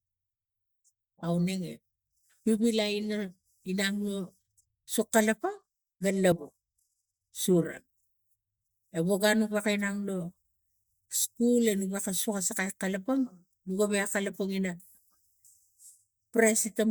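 At 6.32 s there is what is most likely a dropped buffer (overrun): the recording software fell behind and the hardware overwrote a block of samples before they were read, so around 40 ms of audio is simply missing and the material on either side is butted together. Rather than a gap of silence, the speech jumps forward abruptly.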